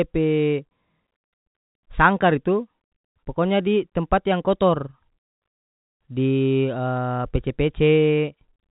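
No technical faults are audible.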